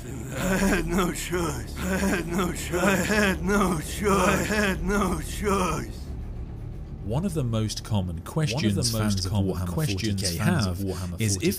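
Throughout the clip, a doubled audio track: an identical full-band copy trails about a second and a half behind at roughly equal level, likely from a second, slower capture path.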